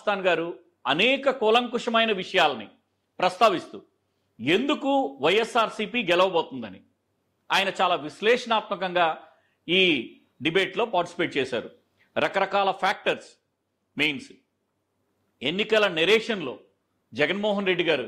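No technical faults can be heard anywhere in the recording.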